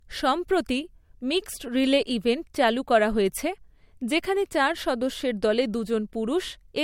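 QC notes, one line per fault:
Throughout: low-bitrate audio saved at a high bitrate. The speech has nothing above 16.5 kHz, with earlier coding losses kept, likely from a low-bitrate MP3 re-encoded at a high bitrate.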